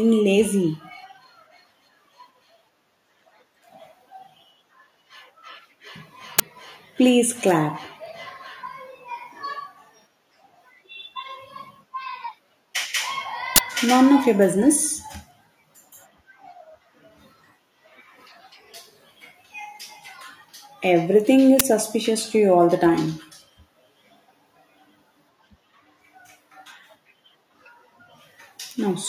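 At 6.39 s, 13.56 to 13.58 s, and 21.60 s just before "suspicious to you all", an uninitialised buffer plays stale memory as loud digital noise bursts of about 12, 23 and 12 ms, fitting unfilled 512- and 1024-sample buffers. A dropout would leave silence instead.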